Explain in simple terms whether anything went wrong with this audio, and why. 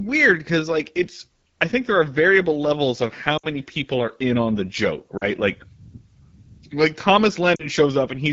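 AMR wideband (HD Voice) codec, throughout the clip: the phone codec here runs at one of its lowest quality settings, so the speech sounds rough and raspy. It rebuilds the voice from a simplified model of the throat and mouth and fills the highest frequencies with shaped noise.

Lost AMR speech frames, at 3.37 to 3.46 s (about 60 ms), 5.17 to 5.25 s and 7.56 to 7.67 s (about 40 ms each): radio errors corrupted small pieces of the signal. The decoder covered each gap by repeating the last good sound at falling volume, so the sound drops to near silence and the voice comes back weak or rough for a moment.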